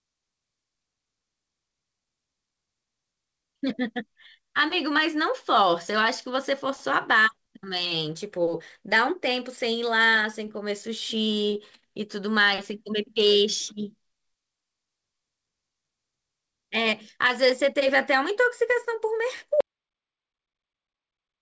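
At 19.61 s the speech cuts off abruptly and the remaining audio, through to the end, is silence with no room tone under it; this audio dropout to silence likely comes from the input being lost while the recorder kept writing silence.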